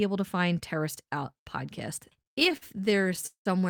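From 2.05 s to 3.47 s the speech breaks into repeated stalls (stutter). Packets were reaching the receiver late or slower than playback, so its jitter buffer kept draining. Twenty-two times it bridged the wait by extending the last sound, with the longest hold at 188 ms, fading it during the longer ones. These fills total about 0.46 s, roughly a third of that stretch. Nothing is lost, but the delivery drags and hiccups.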